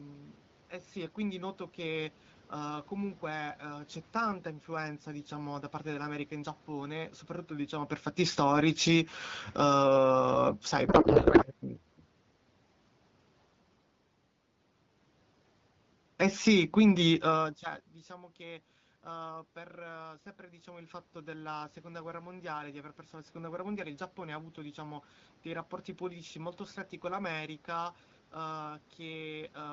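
Automatic gain falling from 7.93 to 11.72 s: just after the talker moves near 7.5 s, the gain control judges the input too loud or its background noise too strong and lowers it by about 8 dB, so speech and background sink together. Overlapping it, automatic gain rising from 8.46 to 10.66 s lifts the level by about 6 dB, and the whole signal swells before the fall takes over again. A codec payload misread from 10.87 to 11.45 s replaces the speech with garbled, warbling noise that barely tracks it. Octet-aligned AMR frames are being read as bandwidth-efficient, so the decoder finds its fields in the wrong places. A second automatic gain falling from 16.16 to 17.89 s, around another talker movement near 17 s, pulls speech and room noise down together by about 4 dB.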